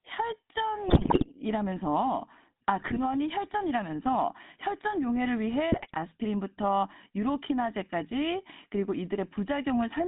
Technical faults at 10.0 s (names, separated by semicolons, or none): GSM full-rate codec